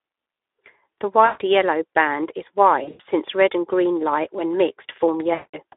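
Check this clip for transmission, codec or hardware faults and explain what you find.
Two faults are present: Speex codec damage throughout the speech, and three bursts of VoIP packet loss concealed by the speech codec.

The Speex codec coloring runs through the whole clip. The line is limited to about 300 Hz to 3.6 kHz, and the voice sounds hoarse and grainy, which fits a bitrate near 11 kbps. Too few bits reach the excitation, so the residual comes out as noise rather than clean pitch pulses. This rough, noisy texture is what separates it from simple band-limiting, which would sound muffled but clean.

VoIP packet loss concealed by the speech codec occurs three times:
1.25 to 1.42 s, just before "yellow band is", with about 140 ms missing.
2.83 to 3.01 s, between "yellow band is" and "red and green light". Here about 140 ms is missing, scattered over 160 ms, with the longest gap at 100 ms.
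5.33 to 5.55 s, with about 200 ms missing.

Each time, the decoder keeps repeating its last pitch and filter at falling gain. The result is a stretched buzzy tone or coloured noise that fades out and stays weak briefly after the audio resumes. Plain dropouts would fall to clean silence or click instead.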